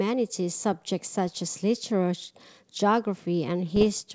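A speech recording over what sounds like G.722 wideband coding has two bursts of bit errors on an ADPCM link, at 1.28–1.36 s and 3.76–3.86 s. Each flipped bit throws the decoder's step size and predictor off, so the damage rings on as pops and rough crackle with brief level jumps. On a waveform these show as spiky, uneven stretches, and on a spectrogram as vertical broadband streaks.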